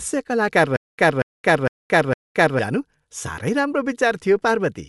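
A recording of speech carries a breathy, grainy edge from start to finish, with nothing above about 11.6 kHz and plainly audible codec damage on the voice. That pattern points to Bluetooth LC3 compression and fits a 48 kbps stream with 10 ms frames. At that rate the transform codec keeps too few bits for the upper spectrum, so it zeroes much of it and fills the gaps with shaped noise. The result is the rough, hissy texture and the hard ceiling on the top end. From 0.76 s to 2.59 s the audio breaks into a stutter with silent gaps. A burst of about 0.23 s plays, then about 0.22 s of dead digital silence follows. The cycle repeats four times at a steady 0.46 s spacing. This is likely a stalled player or stream replaying its last buffered fragment on each retry and then running dry. Whatever should have sounded during that stretch is lost.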